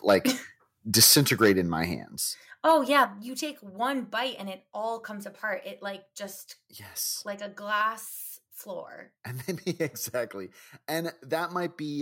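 Microphone overload at 0.08 to 0.15 s, and again from 0.95 to 1.51 s, flattens the tops of the loudest speech peaks. The input was driven about 6 dB and then about 10 dB past the converter's ceiling, so a few percent of samples are cut off. That gives a harsh, crackling edge, strongest in the second stretch. The likely cause is microphone input gain set too high.

Microphone volume stepped down at 1.04 s, in the middle of that second distorted stretch, drops the speech and the background together by about 4 dB. At 2.04 s, just after "in my", it drops by another 4 dB. Each change is a single abrupt step rather than a fade, likely as the call software reacts to the clipping by cutting the device's input level.

Microphone overload returns from 2.68 to 3.03 s, just before "you take one bite". It is milder this time, about 2 dB over with under one percent of samples clipped, and brings a brief roughness on the peaks.

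Microphone volume stepped down at 3.06 s, also just before "you take one bite", then cuts the level a further 7 dB in one sudden step, right after that last overloaded peak.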